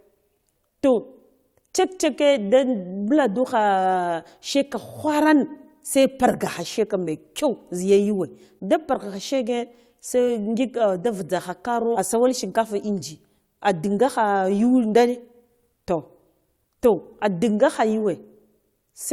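A stream segment skipped at 11.95 to 11.98 s. The speech jumps forward with a short blip, landing on "asawal shinkafa", and a stretch of talk is missing. The likely cause is one segment of the stream failing to load, with the player carrying on from the next.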